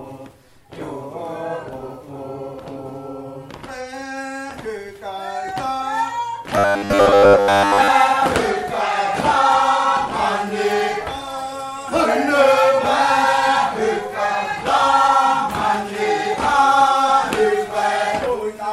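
From 6.58 to 7.90 s the sound turns robotic, a rigid metallic buzz near 100 Hz. The likely cause is repeated short buffers. New audio arrived too seldom, so a 10 ms slice was looped. Most of the real audio in that stretch is skipped.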